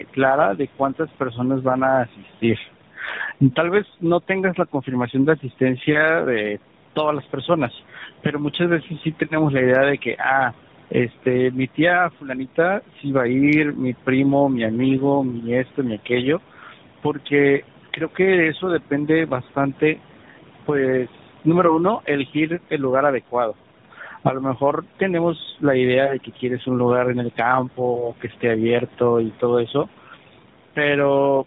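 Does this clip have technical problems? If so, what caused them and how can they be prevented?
Yes. Noise suppressor artifacts run throughout. Steady room noise, about 19 dB below the speech, is pushed down by about 12 dB in the gaps and then rises again under each phrase. On a spectrogram the noise floor pumps in time with the speech. Gentler suppression or a cleaner microphone position would prevent this.

Tandem speech coding also runs throughout. The audio was decoded and re-encoded across two speech codecs in a row, which fits a GSM full-rate leg and an AMR-NB 12.2 kbit/s leg joined over G.711. The result is rough, muffled and warbly, and a spectrogram shows nothing above 3.8 kHz. Keeping one codec end to end, or passing the encoded audio through without transcoding, prevents this.

Speech cut by the noise suppressor appears at 0.03–5.61 s, 11.23–13.05 s and 15.65–30.77 s. Soft consonants and word endings, about half a second, a brief moment and roughly one and a half seconds in total, dip by about 11 to 12 dB. 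In the waveform, phrase tails look abruptly thinned. Better speech detection in the suppressor, or a lower suppression depth, would prevent these cuts.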